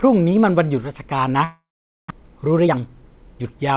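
From 1.44 to 2.12 s the speech stops: a buzzy or hissy continuation of the last sound fades out, leaving about 460 ms of silence. This is likely a long network dropout, with about 400 ms of audio never played and the speech resuming past the gap.

From 2.21 to 3.72 s, a jitter buffer speed-up plays the speech at about 113% tempo with pitch unchanged, so it sounds hurried. The receiver repeatedly trimmed pitch-period-sized pieces to drain roughly a fifth of a second of built-up delay. Throughout, the G.711 mu-law call path leaves nothing above 4 kHz.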